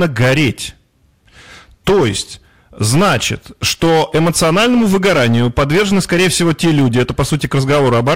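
From the first syllable to the end, the speech is hard clipped. It's been pushed roughly 13 dB past what some stage in the chain could pass, so every peak gets sliced flat, and something like a sixth of the samples were cut off at that stage's limit. Those squared-off tops throw harmonics way up the spectrum, which is why every loud sound comes out as a harsh, buzzy fuzz rather than the odd crackle.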